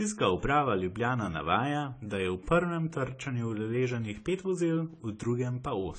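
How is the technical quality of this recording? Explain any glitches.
The technical quality is limited by one fault that runs through the whole recording: low-bitrate audio saved at a high bitrate. The likely cause is speech that was first squeezed through a very low-bitrate codec, something on the order of a 24 kbit/s AAC encode, and then re-saved as a generous MP3. The second encode could not restore the detail already removed. Nothing remains above about 9.7 kHz, so the speech sounds dull and still carries the first encode's artefacts despite the large file.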